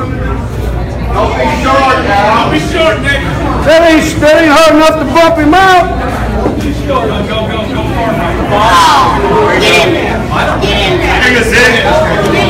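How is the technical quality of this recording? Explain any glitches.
Technical quality is poor, because the recording is hard clipped from start to finish. The signal was driven about 19 dB beyond what the converter or gain stage could pass, so every peak is sliced off flat, and roughly a tenth of the samples sit at that ceiling. Those squared-off tops generate strong high-order harmonics, heard as a harsh, gritty fuzz riding on every loud moment rather than as occasional crackle.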